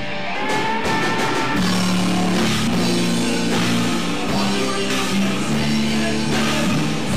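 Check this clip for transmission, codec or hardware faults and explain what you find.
Three brief faults turn up, all of one kind: damaged data in a compressed stream, at 0.35, 2.67 and 4.90 s. Corrupted bytes make the decoder misread frames and lose sync, so each is a short chirp or blip, shown as a thin broadband vertical streak on a spectrogram and an abrupt waveform discontinuity.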